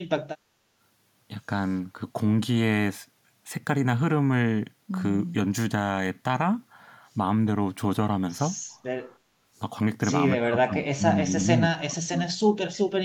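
A speech recording with two kinds of echo canceller fault. The first is background gated by the echo canceller. From 0.38 to 0.76 s, the room sound behind the talker dips sharply, by about 14 dB, then returns. It dips again from 9.19 to 9.39 s, by about 10 dB. In both places the canceller pulled the microphone down while the far-end loudspeaker was playing, and the ambience drops out with it. The second fault sounds like speech suppressed in double talk. From 10.4 to 12.2 s, the talker's own speech sinks hard, by roughly 30 dB at its worst, for about a second and a half in all. It happens again from 12.84 s to the end, briefly, by roughly 25 dB. The likely cause is that both sides talked at once. The canceller could not tell the near talker from the loudspeaker echo, so it turned both down.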